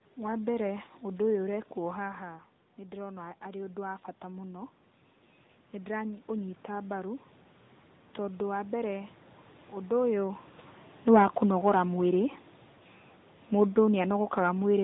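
Tandem speech coding runs throughout: the audio passed through CVSD, G.711 and AMR-NB, compounding rough, warbly artefacts. A spectrogram shows a hard ceiling near 3.8 kHz and smeared harmonics.

From 1.88 to 4.81 s, after the input drops about 11 dB as the talker moves back, automatic gain rising lifts the level about 5 dB. The waveform envelope and the background noise floor swell gradually together.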